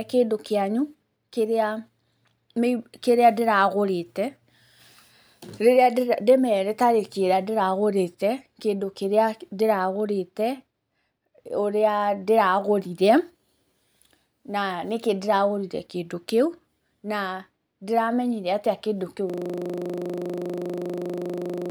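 At 19.30 s the speech gives way to a system hang loop that runs to the end of the clip at 21.71 s. The playback system froze while the sound hardware kept replaying one 40 ms stretch of its ring buffer, about 60 times. At a 25 Hz loop rate this is heard as a rough, steady buzz. A waveform shows one short segment tiled identically. A spectrogram shows a frozen spectral slice with fine harmonic lines spaced 25 Hz apart.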